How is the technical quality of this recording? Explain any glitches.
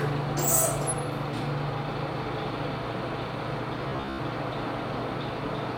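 One glitch stands out. Between 3.89 and 4.19 s, robotic sound from repeated short buffers: audio likely arrived too slowly, so roughly 15 ms fragments looped, forcing a rigid, metallic 66.7 Hz buzz over most of the sound.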